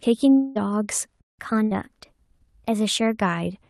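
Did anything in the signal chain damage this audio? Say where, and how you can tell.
Yes. From 0.33 to 0.57 s the speech turns into a smeared continuation of the last sound that fades across the whole gap, with no true silence. It then picks up about 0.22 s further on, and that stretch is simply gone. This is a long network dropout, most likely at the network stage. No packets arrived for that period, and the receiver's concealment extended the last sound rather than leaving a hole.

At 1.21 s the sound cuts off mid-flow into dead silence for about 180 ms, then resumes at 1.39 s. The gap is clean and has no concealment buzz, which points to a playback stall. The player's output buffer likely ran dry or its thread was blocked, so nothing was written to the device until it recovered.

Right after that stall, from 1.39 to 3.20 s, the speech runs audibly fast and sits higher, about 1.5 semitones up, before dropping back to normal. 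This is catch-up at higher speed in the playback stage. The player resampled its backlog at 1.1 times normal rate to recover the time lost in the stall, so speed and pitch rose together.

Inside that fast section, at 1.63 to 1.73 s, the last sound is held briefly and dies away. The audio then resumes with about 80 ms missing. This is a burst of packet loss on the network. A run of consecutive packets was lost or arrived too late, and the decoder's concealment stretched and faded the last sound across the gap.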